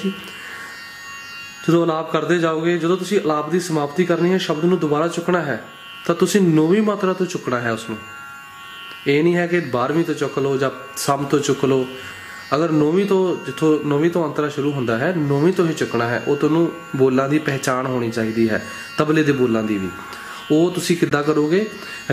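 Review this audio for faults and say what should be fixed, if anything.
There's a corrupt frame decoded twice, at 12.80 to 12.82 s and 21.09 to 21.11 s. Each is a short chirp, squeak, blip or burst of noise, because a couple of compressed frames with flipped bits were played anyway, putting energy at the wrong frequencies. Adding error checking on the stream so damaged frames get concealed instead of decoded should stop it.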